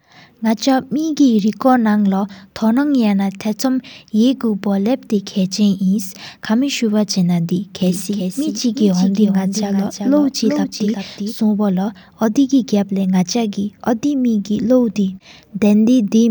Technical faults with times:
7.82-11.34 doubled audio track

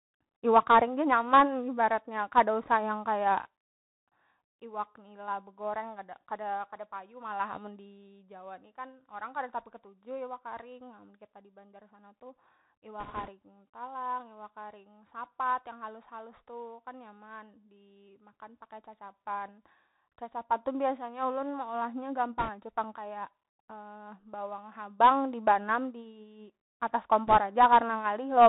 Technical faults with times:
0.00-28.49 Bluetooth CVSD headset codec
13.00-13.30 bit errors on a Bluetooth voice link
22.38-22.50 bit errors on a Bluetooth voice link
27.27-27.37 bit errors on a Bluetooth voice link

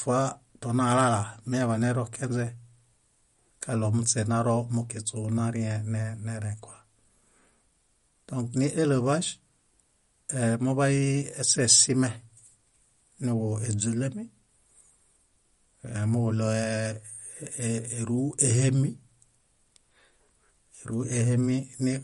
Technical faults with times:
0.00-22.03 MP3 compression

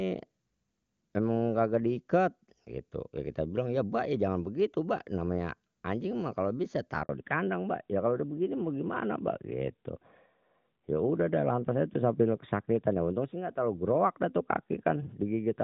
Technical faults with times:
7.03-7.09 handover gap
7.09-15.63 fallback to narrowband

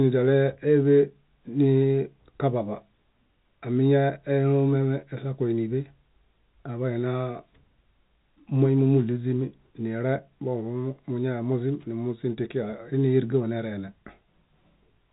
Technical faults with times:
none

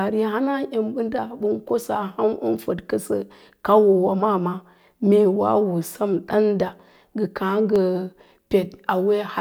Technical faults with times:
6.73-8.78 periodic USB or driver dropouts

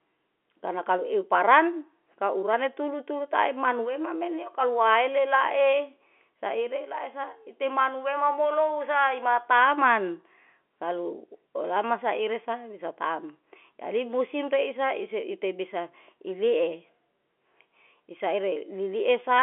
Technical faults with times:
none

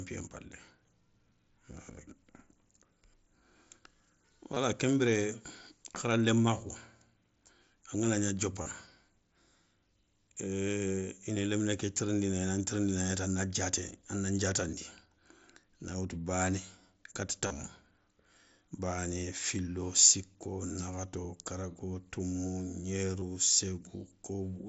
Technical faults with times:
4.54-4.57 concealed Bluetooth headset packet loss
8.62-8.66 concealed Bluetooth headset packet loss
17.47-17.50 concealed Bluetooth headset packet loss
23.20 concealed Bluetooth headset packet loss

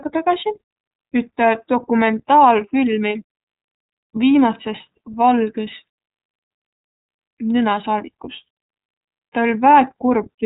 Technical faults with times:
0.00-10.46 iLBC codec

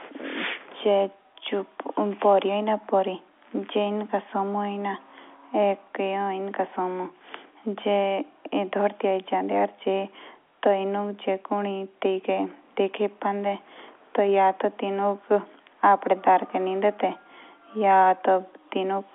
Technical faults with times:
none

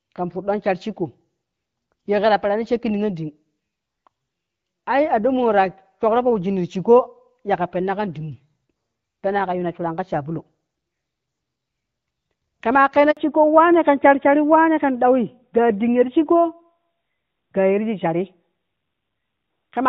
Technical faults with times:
13.11-13.17 handover gap
13.17-19.89 fallback to narrowband

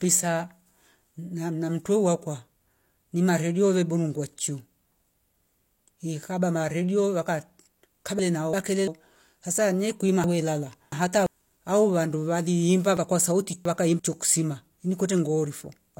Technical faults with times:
8.19-8.87 chunks out of order
10.24-11.26 chunks out of order
12.97-13.99 chunks out of order

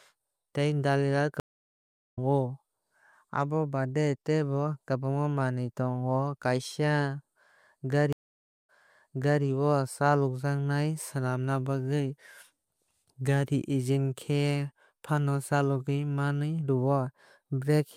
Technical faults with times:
1.40-2.18 stream reconnect
8.13-9.44 stream reconnect

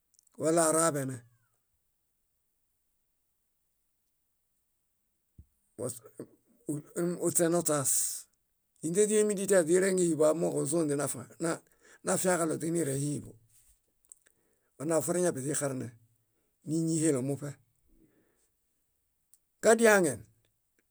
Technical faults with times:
none

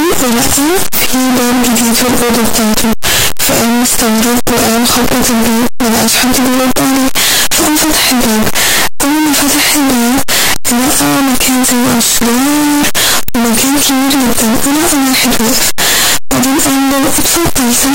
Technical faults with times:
0.00-17.95 signed and unsigned mixed up

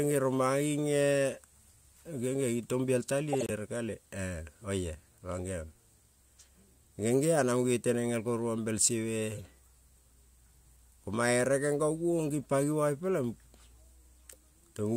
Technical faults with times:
3.30-3.51 corrupt frame decoded
9.35-9.40 corrupt frame decoded

